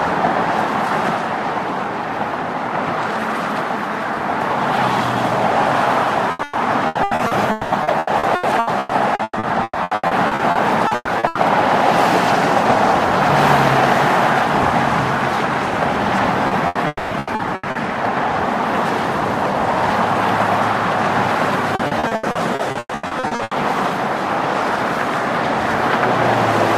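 From 6.31 to 11.38 s the audio turns choppy, with pieces missing: repeated packet loss (robotic sound). Twenty-seven separate holes, the longest 200 ms, were each patched by extending the sound just before them, about 2 s of fill in all, roughly 39% of the stretch. Unlike a single burst, the gaps keep coming, so the texture stays broken instead of dropping out once and recovering.

At 16.47 to 16.54 s a short concealed packet loss leaves a quick smear lasting 40 ms. The receiver bridged the missing audio from the preceding sound and blended back in, so it registers as a brief wobble, not an audible break. Its length separates it from the burst that follows.

From 16.67 to 16.78 s comes a burst of packet loss: 80 ms went missing in a row. The fill stretches the last sound into a short held buzz or hiss that sags as it is turned down, then the audio resumes further along with that portion gone. 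It is longer than the smear, yet still a single gap that recovers quickly.

Between 16.87 and 17.14 s the sound holds, fades and briefly goes quiet. This is likely a long network dropout. About 240 ms is replaced by a decaying continuation of the last sound, followed by roughly 20 ms of near silence. That silent tail, where the fill runs out, is what distinguishes it from the burst.

Repeated packet loss returns right after the dropout, from 17.19 to 17.78 s. Four gaps, the longest 80 ms, cover about 41% of that span. It comes back once more from 21.75 to 23.54 s, this time with fifteen gaps of up to 120 ms that fill about 800 ms, roughly 45% of the stretch. Both passages have the same chopped character as the first.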